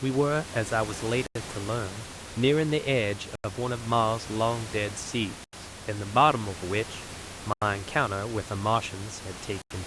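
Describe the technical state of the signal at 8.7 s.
At 8.7 s the signal is intact, with no fault present, and the room's own background noise sits about 13 dB below the speech as part of the recording.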